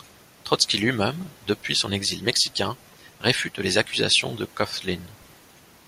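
Nothing in this recording trips any alarm; there are no technical faults to point to, so there's nothing to walk through moment by moment.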